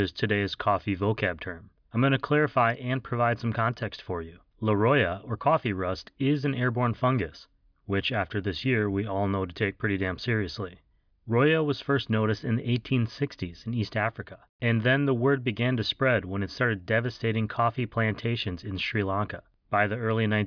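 Nothing in the recording stands out as a technical fault; the speech runs along without any dropouts, glitches or other problems worth flagging.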